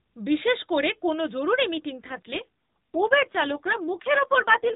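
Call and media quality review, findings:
AMR rate drop, 1.90 s to end of clip. Speech turns rougher and more synthetic with no gap and no band change; the AMR-NB path stays capped at 4 kHz. Sound fits a codec mode switch from 12.2 to 5.9 kbps, trading detail for error protection on a weak radio link.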